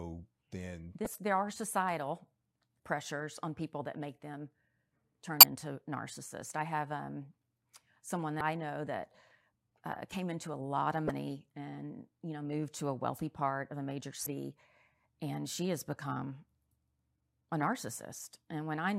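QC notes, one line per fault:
1.03–1.06 s, 5.40–5.43 s, 8.38–8.41 s, 11.07–11.10 s and 14.23–14.27 s: damaged data in a compressed stream. Each is a short, roughly 30 ms glitch cutting across the speech. Corrupted bytes in the encoded stream make the decoder misread those frames and produce garbage, and it loses sync and has to hunt for the next valid frame header before normal decoding resumes.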